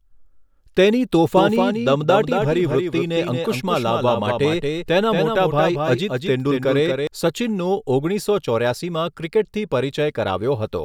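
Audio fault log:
1.37–7.07 s, doubled audio track: the speech is joined by a full-band copy trailing about 200 ms behind and around 5 dB quieter, likely a second, slower capture path. Unlike an echo, it has no decay or room colour and switches on and off abruptly.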